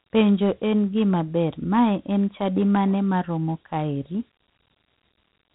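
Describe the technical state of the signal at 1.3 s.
At 1.3 s the signal carries Dialogic VOX ADPCM coding, present across the whole clip: speech quantised to 4-bit adaptive steps, which fits 32 kbps at 8,000 samples a second. Nothing reaches above 3.9 kHz, and a gritty, plainly audible hiss rides the speech.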